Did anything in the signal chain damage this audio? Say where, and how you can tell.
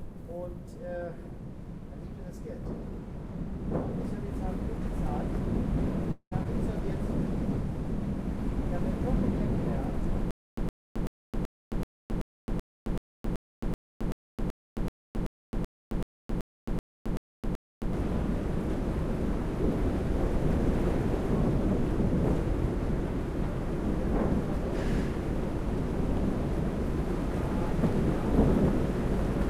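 Yes. Network stage: a long network dropout at 6.11 to 6.33 s, where concealment fades into 70 ms of silence, likely from packet loss that removed about 0.2 s of audio.

Playback stage: a stutter with silent gaps from 10.31 to 17.93 s. A 114 ms fragment repeats 20 times every 381 ms with 267 ms of digital silence between, likely from a stalled player re-serving its last buffer.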